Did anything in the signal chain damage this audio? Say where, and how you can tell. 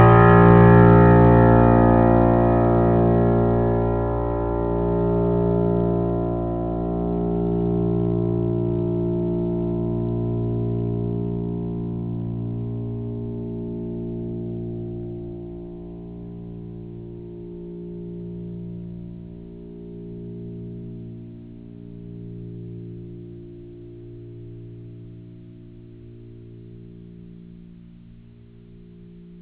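No, nothing in the chain damaged this music recording. It has come through a call path, and nothing above 4 kHz reaches the output, which fits a narrowband telephone codec such as G.711 A-law at 64 kbps.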